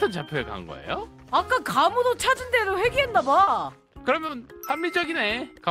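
Short concealed packet loss at 3.43–3.49 s and 4.27–4.31 s: about 40 ms, then 20 ms, never arrived, so the decoder extended the preceding sound, leaving brief smears.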